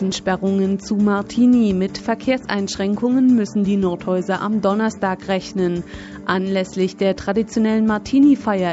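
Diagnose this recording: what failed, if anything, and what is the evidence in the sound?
Nothing has failed: the sound has passed normally through call microphone processing and a WebRTC call path, whose codec limits the audio to a band ending at 8 kHz, as expected for that path.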